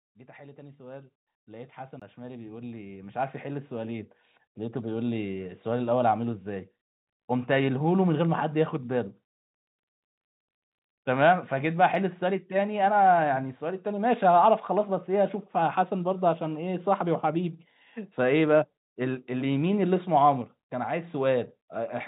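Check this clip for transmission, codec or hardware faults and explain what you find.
Two faults stand out, one from gain control and one from the playback hardware, heard over a call-style path whose audio stops at 4 kHz.

Automatic gain rising, from 0.37 s to 5.19 s: the gain control judged the input too quiet and kept raising its amplification, by about 19 dB overall. Speech and background swell together, climbing steadily over roughly five seconds rather than jumping.

CD skip, from 1.99 s to 2.02 s: a disc flaw or knock made the laser jump to a different turn of the spiral. The player mutes briefly, leaving a gap of about 20 ms, then resumes from another point, so the speech suddenly jumps.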